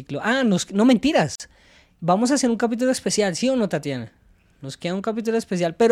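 Two separately encoded pieces of this speech were joined at 1.35 s without trimming the encoder's start delay and end padding. That leaves a gap at the join of encoded pieces: a break of about 44 ms with smeared edges, so the fully silent part is shorter, before the speech resumes at 1.40 s.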